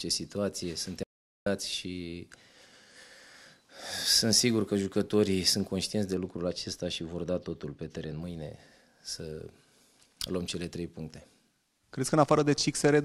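An audio dropout to silence runs from 1.03 to 1.46 s, about 430 ms of silence with no room tone, unlike a gate or fade. The likely cause is a momentary input loss. From 6.15 to 8.22 s, de-emphasis applied wrongly tilts the top end down smoothly, about 10 dB at 10 kHz relative to 1 kHz. This sounds dull rather than sharply band-limited like a low-pass cutoff.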